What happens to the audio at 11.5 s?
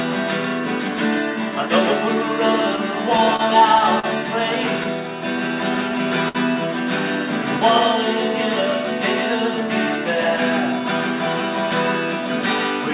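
Doubled audio track at 11.5 s, as throughout the clip: a second copy, about 5 dB quieter and with no decay or room colour, trails the original by roughly 150 ms, likely because a slower path captured the sound again.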